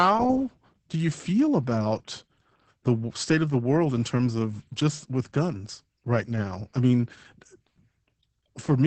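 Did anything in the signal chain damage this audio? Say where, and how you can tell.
Yes, at the codec. Opus voice compression in SILK mode at what sounds like 10 kbps cuts everything above 8.4 kHz and codes the excitation coarsely, so the speech is muffled, hoarse and robotic throughout.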